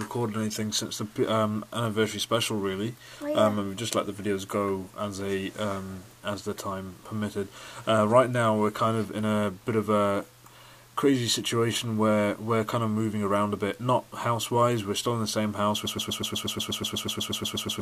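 A broken-record loop starts at 15.86 s: a 0.12 s fragment repeats exactly to the end, likely a stalled player or stream resending its last buffer.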